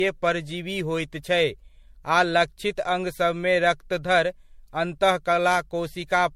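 Across the whole speech clip the sound is swirly, smeared and hollow, with consonant attacks blurred into their surroundings, more damaged than one pass at a bitrate that fits 64 kbit/s MP3 would leave. This is generation loss, likely from the audio being re-encoded about five times, each pass requantising on a shifted frame grid. A spectrogram shows nothing above 16.4 kHz, patchy holes and smeared onsets; the waveform's transients look softened.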